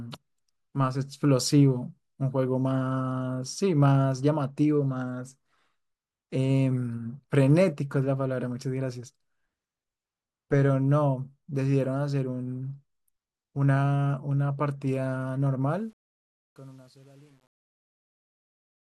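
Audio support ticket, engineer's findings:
Truncation distortion on the fade-out, 15.69 s to end (18.81 s). Fade or gain stage keeps too few bits and adds no dither. Step size points to roughly 9-bit resolution. Worst from 16.18 s: gritty, square-stepped waveform. Unlike codec artefacts, the grit tracks the falling level.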